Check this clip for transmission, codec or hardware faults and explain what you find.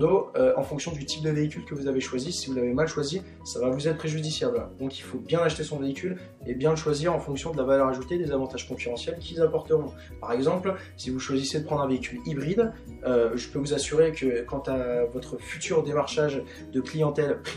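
No faults found.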